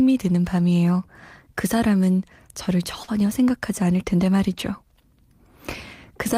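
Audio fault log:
3.03 to 3.09 s, short concealed packet loss: about 40 ms of audio never reached the decoder in time, so the receiver invented a stand-in by stretching the last sound forward, pitched if voiced and as shaped noise if not, before fading back into real audio. The result is a brief smear or wobble with no true gap. Unlike a rebuild from error correction, nothing here came from the real signal; the filled stretch is guesswork carried over from what came just before.
3.07 to 3.09 s, lost packet rebuilt from error correction: a single 20 ms packet went missing, but the following packet carried a low-bitrate spare copy of it (Opus in-band forward error correction), and the decoder played that copy in place of the lost frame. Because the stand-in comes from the actual audio, the sound stays continuous and follows the real signal, yet this short frame comes out rougher and noisier than its surroundings. 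Concealment, by contrast, merely extends the preceding sound and can drift from what was really there.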